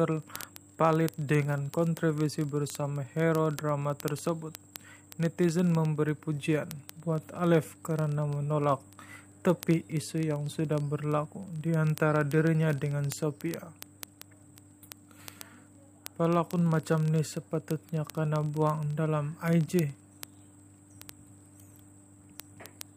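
From 0.12 s to the end, word clock ticks repeat roughly every 30 ms: an unlocked receiver clock, about 1000 ppm off, slips one sample each time, producing sharp, uneven clicks.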